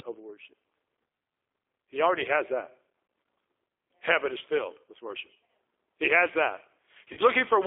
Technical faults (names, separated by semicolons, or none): G.729 codec; VoIP packet loss concealed by the speech codec